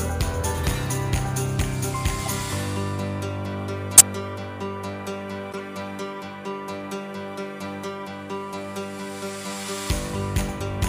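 Corrupt frames were decoded at 2.24–2.32, 3.94–4.02, 5.52–5.59 and 9.27–9.29 s. Damaged compressed frames played anyway put energy at the wrong frequencies, giving brief glitches, the 3.94 s one the strongest.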